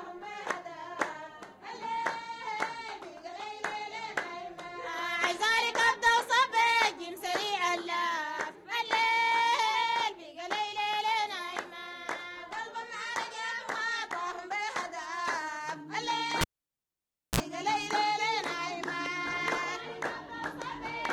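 At 16.41 s the cable is pulled and plugged in while live. A pop marks the break, then the sound drops to near silence for about 0.94 s. As the plug goes back in, only the tip touches at first, and a 46 ms burst of 60 Hz mains buzz comes through before a second pop restores the audio at 17.40 s. On a waveform this shows as two sharp spikes bracketing a flat gap. A spectrogram shows a brief stack of 60 Hz harmonics just before the return.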